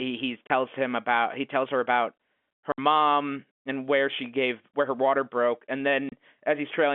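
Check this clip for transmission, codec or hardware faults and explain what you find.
The clip has one transmission fault, recurring three times, over a telephone-band G.711 path.

Packet loss filled with silence at 0.47 s (30 ms), 2.72 s (60 ms) and 6.09 s (30 ms): lost packets were replaced with nothing, so the speech drops into abrupt holes. Their lengths fit 10 ms packets.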